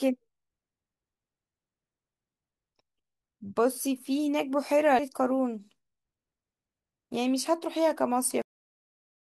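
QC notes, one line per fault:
4.99 s, compressed frames skipped. The speech jumps forward by roughly 0.4 s, which fits about five frames of around 85 ms each going missing or being rejected by the decoder.
8.42 s, cut-off end. The speech stops mid-sound and drops straight to digital silence, with no natural decay. The final buffers were never written or played, so the remaining 0.86 s is empty and the sound ends abruptly.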